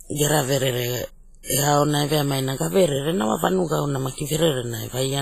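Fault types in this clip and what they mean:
WMA compression: A transform coder, likely WMA, ran at a low bitrate that fits about 24 kbps. Long blocks smear quantisation noise over tens of milliseconds and zero weak components, leaving heavy ringing, washy hiss that breathes with the speech, and nothing above 15.3 kHz.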